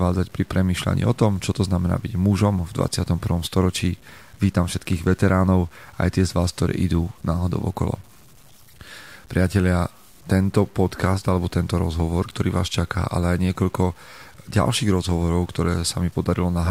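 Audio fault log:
Throughout, low bit depth without dither: the speech carries a grainy, gritty distortion that shifts with each syllable and sputters on the quietest tails, roughly 35 dB below the voice. This likely comes from truncation to very few bits, which fits an 8-bit signal, without dither.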